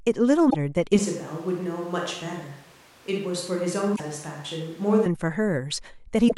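At 0.47 to 0.55 s a short glitch cuts across the speech. That is damaged data in a compressed stream: the decoder hits corrupted frames, loses sync and hunts for the next valid frame header.

From 0.99 s the speech abruptly turns hollow and roomy, thinner in the bass and about 5 dB quieter. A room-noise floor appears, roughly 25 dB below the speech. This points to a switch to a distant microphone, most likely a camera or room mic standing in after the close microphone dropped out. A simple EQ or filter change would alter the tone without adding reverberation or extra background noise. The close sound returns just as suddenly at 5.06 s.

Inside that stretch, a second burst of damaged data in a compressed stream lands at 3.93 to 4.00 s. A third comes at 6.25 to 6.32 s, close to the end of the clip. Each is a brief blip, the same signature as the first.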